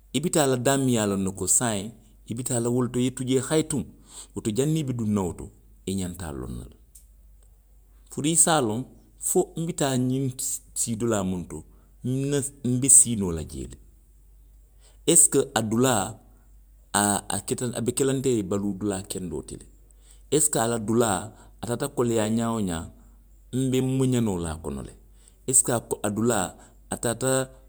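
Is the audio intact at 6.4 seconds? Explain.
Yes, the speech is intact at 6.4 seconds, with no dropout, click, distortion or other fault at that moment.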